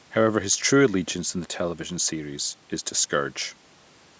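Speech with no technical faults: the call microphone processing band-limits it to 8 kHz, and the room noise sits about 36 dB below the speech.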